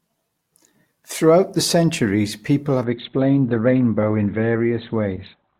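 Speech that turns suddenly dull and watery at 2.84 s, after "the centuries people", with nothing above 4.3 kHz to the end: an adaptive stream at a lower bitrate, fitting Opus dropping from 64 to 12 kbit/s.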